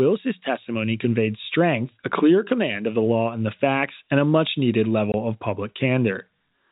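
At 5.12 s the speech drops out completely until 5.14 s, a 20 ms hole caused by packet loss filled with silence. The receiver had nothing to play for that stretch, which fits two lost 10 ms packets, and inserted silence instead. It is heard as a brief gap with abrupt edges. On a waveform it appears as a flat line with vertical cut-offs, and on a spectrogram as a blank column bordered by thin broadband streaks. The narrowband G.711 telephone coding, with nothing above 4 kHz, continues on either side of the gap.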